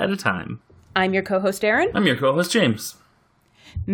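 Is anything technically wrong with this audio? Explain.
No, nothing is technically wrong with this audio.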